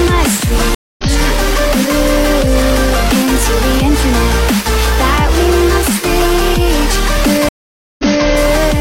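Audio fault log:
0.75–1.05 s, stream reconnect: about 0.24 s of silence, then the sound picks up roughly 150 ms further on, so a short stretch is skipped. A fresh decoder starting mid-stream gives a soft fade-in, unlike a plain dropout that resumes at the same point.
7.49–8.27 s, stream reconnect: a 0.5 s silence, then the audio resumes 0.28 s earlier, repeating a piece as the server resends a burst. The repeat, not a skip, separates this from the first event.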